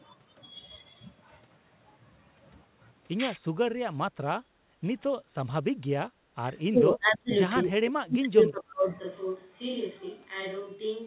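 A speech recording with dips and a change of microphone. The talker's level drops in four places: 4.32 to 4.42 s, 6.34 to 6.40 s, 6.70 to 7.32 s, and 7.66 to 8.88 s. The first three fall by around 25 dB. The last is deeper, around 35 dB, and runs for about a second in total. The voice thins and breaks into pieces. This is likely speech suppressed in double talk. The far side was talking at the same moments. The echo canceller could not tell the local voice from the loudspeaker echo, so it pulled both down. Between those dips, from 4.70 to 4.81 s, the room sound sinks by about 14 dB for roughly a tenth of a second and then comes back. That is background gated by the echo canceller. While the loudspeaker played, the canceller clamped the microphone hard, taking the background with it. It released once the playback stopped. At 8.99 s the sound changes abruptly and stays that way to the end. 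The voice turns roomy and hollow, with less bass. It is roughly 10 dB quieter, and room noise sits only about 35 dB under the speech. This points to a likely switch to a distant microphone. The close microphone dropped out, and a farther one took over.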